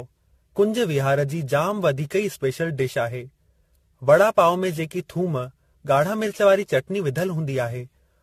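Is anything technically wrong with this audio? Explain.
Yes. Throughout, the speech shows generation loss, likely from about ten passes through a codec like AAC at around 64 kbit/s. It sounds swirly, hollow and smeared, with nothing above 14 kHz and blurred attacks, which is worse than a single encode would explain.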